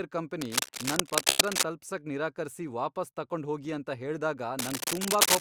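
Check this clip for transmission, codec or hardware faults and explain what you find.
Two kinds of fault turn up in the speech, both probably from the hardware and transmission path.

Cable scratch noise: from 0.41 to 1.64 s, a dense, uneven scratching rides over the speech at roughly its level. It returns from 4.59 s to the end, after "ತಕೊಂಡು ಹೋಗಿ ಅಂತ ಹೇಳ್ದಾಗ", somewhat louder than the speech. A worn cable or connector being moved is the likely cause, its contact resistance jumping about.

Call audio freeze: from 1.29 to 1.42 s, inside the first scratch, the sound briefly turns into a fading buzz or hiss for about 110 ms, then resumes where it stopped. Delayed packets likely emptied the jitter buffer, so nothing is lost but everything after arrives 110 ms later.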